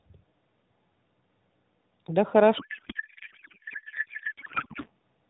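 Codec payload misread from 2.58 to 4.90 s: octet-aligned AMR frames are unpacked as bandwidth-efficient, so misplaced bits turn the speech into garbled, warbling noise.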